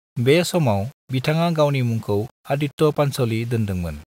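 Speech runs throughout with low bit depth without dither: a grainy, gritty distortion that tracks the voice, worst in quiet passages, where low-level detail sputters between steps or drops out. Quantisation error sits roughly 30 dB below the signal, likely from rounding to about 7 bits without dither.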